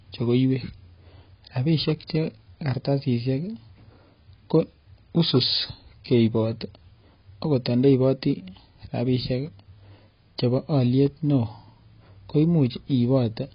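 From start to finish the speech has nothing above 5 kHz and sounds dull and smeared, with a warbling, fizzy texture on sibilants and held vowels. That swirl, absent from a plain low-pass filter, points to heavy AAC compression, likely AAC-LC starved near 16 kbps.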